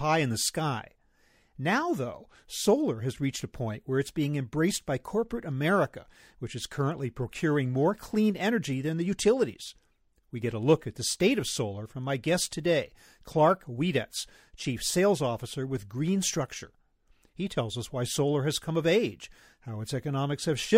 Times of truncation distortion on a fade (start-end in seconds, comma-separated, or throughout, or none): none